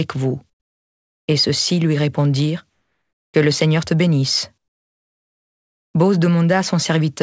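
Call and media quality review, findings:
Comfort noise in place of the background, 2.70–3.34 s: real background replaced by steady, featureless hiss about 6 dB quieter over a G.722 band ending at 8 kHz. Likely DTX pause filled receiver-side; noise, not a silent gate dropout.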